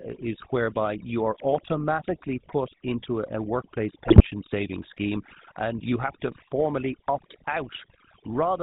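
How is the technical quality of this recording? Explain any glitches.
The technical quality is poor throughout, with a short burst of corruption near the middle.

For the whole clip the background drops and breaks up into twinkling specks. That is overdone noise removal, where aggressive suppression switched off frequency bands close to its noise estimate and took quieter speech detail with them.

Also throughout, the voice has a buzzy, gravelly roughness and nothing above 4 kHz. That points to the GSM full-rate codec at about 13 kbps, which rebuilds speech from a vocal-tract model driven by sparse, regularly spaced pulses.

From 4.06 to 4.27 s the voice breaks into squawks, pops and gargling. These are GSM bit errors, where corrupted filter, pitch or gain values distorted the spectrum or level across roughly ten consecutive frames.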